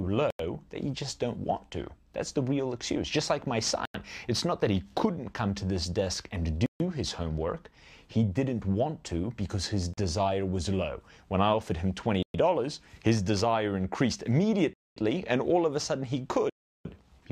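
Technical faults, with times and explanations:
0.30 to 16.85 s, Bluetooth stall: the sound drops to silence seven times, at 0.30 s for 90 ms, 3.85 s for 91 ms, 6.66 s for 140 ms, 9.94 s for 40 ms, 12.23 s for 114 ms, 14.73 s for 231 ms and 16.50 s for 354 ms, with the gaps growing longer toward the end. These are likely radio interference delaying packets so the headphones' buffer empties and playback halts until retransmitted data arrives, which produces clean dropouts to silence.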